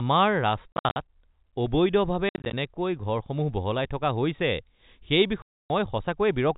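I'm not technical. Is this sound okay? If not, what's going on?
No. There is packet loss filled with silence at 0.72 to 0.96 s, 2.29 to 2.53 s and 5.42 to 5.70 s. Small chunks of the speech went missing in transit, and silence was played instead. In the first two spots this causes short choppy gaps. The third is one solid dropout of about a quarter second. The gap lengths fit chunks of 10 ms each.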